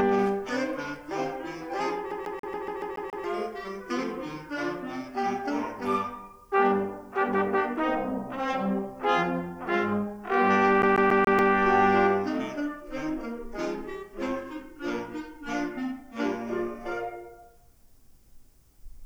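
A CD stuck on one turn interrupts the audio twice, from 2.11 to 3.24 s and again from 10.82 to 11.53 s. A scratch keeps knocking the laser back one track at the same point of each rotation, so a 0.14 s slice of sound replays, eight times in the first stretch and five in the second, with a brief mute at every jump. The result is a rapid, perfectly even stutter.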